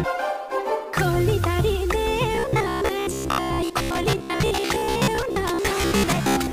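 Audio was likely arriving too seldom from 2.35 s to the end, with roughly half the time filled by repeating a short block of about 15 ms, which produces robotic sound from repeated short buffers: a rigid, metallic buzz fixed near 67 Hz.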